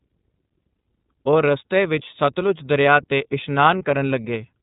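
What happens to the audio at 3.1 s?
At 3.1 s the speech is still carrying the iLBC codec damage that runs through the whole clip, plainly audible as a rough, slightly synthetic quality. The codec rebuilds each short block independently, which fits 30 ms frames in the 13.33 kbps mode, and keeps only the narrowband range. On a spectrogram everything above 4 kHz is blank, with a hard ceiling.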